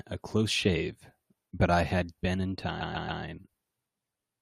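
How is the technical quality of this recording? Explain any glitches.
The recording has one glitch, a stretch of repeated frames. Between 2.80 and 3.22 s, a short run of compressed audio was delivered more than once, and the decoder simply played it again. A block of about 139 ms, consistent with a handful of codec frames, sounds three extra times in a row, so the speech stutters through that segment. The repeats add about 418 ms to the clip.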